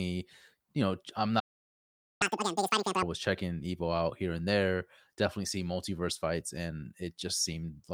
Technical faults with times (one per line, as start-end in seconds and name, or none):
1.39-2.22 playback stall
2.22-3.03 catch-up at higher speed